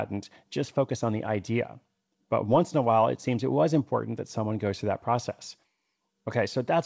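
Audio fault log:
Nothing stood out on listening to this speech, which comes through a call path whose wideband codec leaves nothing above 8 kHz.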